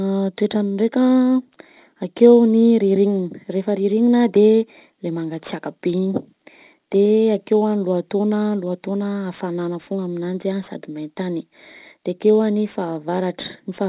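From start to finish the speech carries aliasing. The band stops hard at 4 kHz, which fits a drop to an 8 kHz rate done without a proper low-pass beforehand. Everything that sat above 4 kHz got folded back down into the band, landing on unrelated frequencies. So the s and sh sounds come out gritty and metallic. That folded junk sits roughly 30 dB under the speech.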